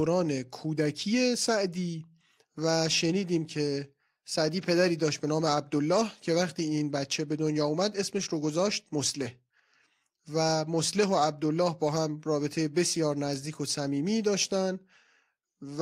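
No technical faults are audible.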